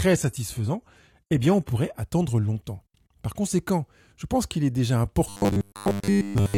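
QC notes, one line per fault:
0.00–2.00 s, adaptive stream starting at a low bitrate: the opening has nothing above 14.9 kHz and stronger codec smearing, which fits a roughly 20 kbit/s HE-AAC start. It then jumps abruptly to a fuller AAC-LC sound near 96 kbit/s, with no gap, unlike a dropout or rebuffer.
5.29–6.58 s, robotic sound from repeated short buffers: the speech becomes a rigid metallic buzz at 100 Hz while loosely following the words, which fits 10 ms chunks being looped. This is likely from buffer underruns, with most of the real audio skipped.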